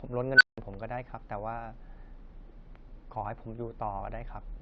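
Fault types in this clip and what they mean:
Unstable filter: A recursive filter with bad coefficients feeds its own output back until it runs away. Here a tone at around 1.5 kHz swells from nothing to clipping in about 59 ms, starting at 0.35 s, then the numbers overflow and the sound drops out for about 170 ms, ending near 0.58 s. A spectrogram shows a single bright horizontal line thickening fast, then a blank gap. The waveform grows into a squared-off block before going flat.
Damaged data in a compressed stream: Corrupted bytes in the encoded stream make the decoder misread frames and lose sync until it finds the next valid frame header. The result is a brief chirp or blip at 1.78 s and again at 4.00 s, each under 20 ms. On a spectrogram each shows as a thin vertical smear or patch of scrambled energy that breaks the surrounding pattern. The waveform has a short, jagged discontinuity at each point.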